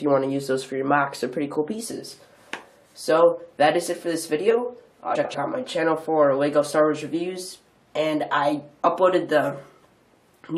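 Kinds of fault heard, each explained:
Frames out of order: two adjacent blocks of frames, each about 93 ms and likely four frames long, were decoded in swapped order, so the stretch from 5.15 to 5.35 s plays with its halves exchanged. It comes across as a brief garbled flutter. Unlike a dropout or a repeated frame, nothing goes missing or doubles and no time is lost; the same sound simply arrives rearranged.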